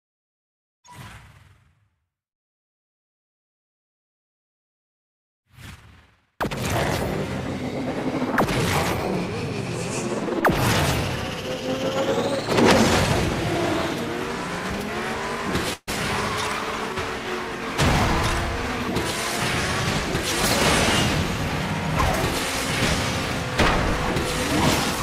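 At 15.73 to 15.89 s there is a burst of packet loss. The receiver bridged the gap by extending the last sound and fading it over about 138 ms, followed by roughly 20 ms of silence. Playback then resumes with about 140 ms of audio missing.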